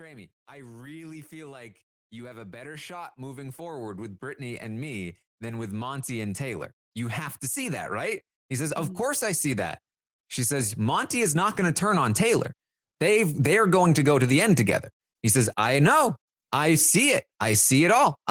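From 0.05 to 9.71 s the automatic gain rises steadily by about 19 dB, lifting the speech and the background noise floor together as the control chases a quiet input; the waveform envelope widens slowly and the spectrogram brightens evenly across all bands. A second, smaller automatic gain rise of about 6 dB runs from 10.49 to 13.85 s, ending just before "to go to the", with the same gradual joint swell.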